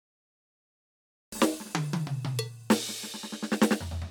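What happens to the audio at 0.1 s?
At 0.1 s the music is still absent: a cut-off start leaves digital silence from 0.0 s to 1.32 s, because capture began late. The music then enters mid-sound with no attack, showing as a flat waveform line and a blank spectrogram ending at a hard vertical edge.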